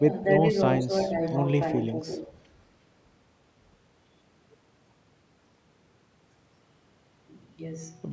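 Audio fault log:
0.00–0.11 s, 0.82–0.90 s, 1.08–1.15 s and 1.93–2.02 s, speech suppressed in double talk: the speech briefly sinks in level, each time for a tenth of a second or less. The first dip is the deepest, about 10 dB, and the later three are shallower, about 5 dB. These are likely moments when the far side was talking at the same time, so the echo canceller could not tell this speech from loudspeaker echo and turned everything down.
1.03–1.37 s and 2.08–2.31 s, echo leak: a faint, delayed copy of the speech trails behind it, about 20 dB quieter than the main signal and lagging by roughly 0.35 s, heard as a ghost in short stretches. The likely cause is a far end playing the call on a loudspeaker whose echo canceller let part of its microphone pickup through, sending this speech back into the call.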